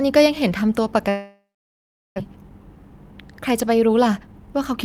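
From 1.09 to 2.20 s there is a long network dropout, most likely caused by packets that never arrived. The last sound is stretched into a buzz that fades, leaving about 0.74 s of silence. When the speech resumes, about 0.6 s of it is simply gone. Unlike a brief gap or a skip, the fill stretches the final sound before going quiet. The later speed-ups show that the delay grew by roughly half a second.

Jitter buffer speed-up follows, as the receiver works that built-up delay back down. From 2.27 to 3.13 s the speech runs at 112% speed, with roughly a tenth of a second removed. From 3.88 to 4.79 s it runs at 115%, with roughly 150 ms removed. Short pitch-period pieces are cut repeatedly, so the speech sounds hurried but the pitch stays put, which sets it apart from a plain faster playback that would raise the pitch.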